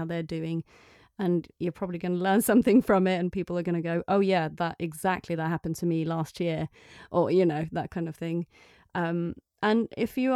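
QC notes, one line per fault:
Nothing stood out on listening.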